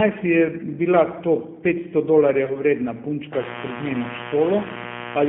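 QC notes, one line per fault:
Throughout, G.729 codec: plainly rough, synthetic speech squeezed into a 150 Hz to 3.4 kHz line band, which fits an 8 kbit/s G.729A pulse-coded rebuild of each frame.
2.45 to 2.63 s, VoIP packet loss concealed by the speech codec: about 30 ms went missing, so the decoder stretched its last frame into a fading sound, and the speech stays smeared a while after.
3.33 s to the end, mains buzz: a steady, raspy 60 Hz buzz with harmonics climbing high, sitting only about 10 dB under the speech, like spiky interference off a dimmer or rectifier.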